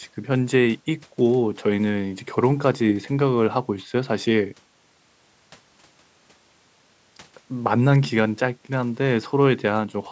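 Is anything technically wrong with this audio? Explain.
No, nothing is technically wrong with this audio.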